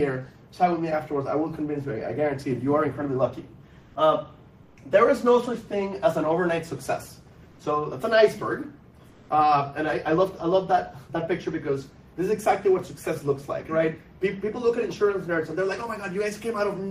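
Comfort noise in place of the background appears at 3.81–3.95 s, 4.63–4.77 s, 7.51–7.59 s and 9.09–9.29 s. In these pauses, the real background, about 31 to 33 dB below the loud passages, gives way to a smooth, featureless hiss lasting 80 to 200 ms. It drops by about 2 dB, 5 dB, 2 dB and 0 dB respectively. The likely cause is discontinuous transmission, as in Opus DTX, with the receiver synthesising filler noise until sound resumes.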